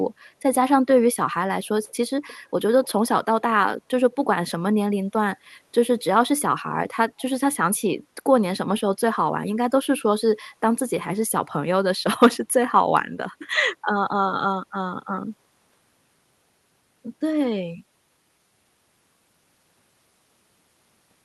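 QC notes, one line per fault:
1.88–1.94 s, 2.27–2.37 s, 2.84–2.92 s, 7.18–7.22 s: echo leak. Brief, faint copies of the speech return 301 ms after the original, roughly 25 to 35 dB below it. The likely cause is a loudspeaker pickup at the far end that its echo canceller did not fully remove.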